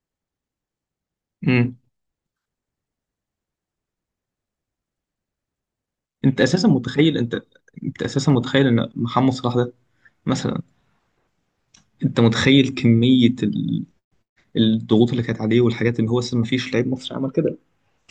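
At 8.30 s and again at 9.52 s the speech carries a single sharp click, each showing as a thin vertical line across the spectrum. These are most likely dropped samples: a handful, a fraction of a millisecond, go missing, so the waveform jumps abruptly to a later value. Unlike a dropout, nothing is audibly lost and there is no gap or silence, only the isolated tick.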